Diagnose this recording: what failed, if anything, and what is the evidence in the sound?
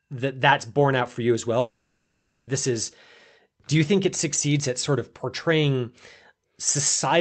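The network stage failed, with a long network dropout between 1.59 and 2.50 s, right after "out for you as". Nothing real comes through for roughly 0.9 s. Instead the receiver's concealment stretches the last bit of sound into a fading buzz or hiss, ending in about 0.15 s of silence before the audio resumes at "this is" with that section gone. That pattern most likely means a run of lost packets on the call path. The call's codec band-limits around 8 kHz, which fits Opus at about 32 kbps.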